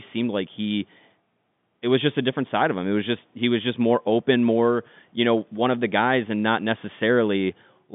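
No technical faults can be heard in the speech, which carries the narrow band of a normal G.711 telephone line, running from 150 Hz to 3.6 kHz.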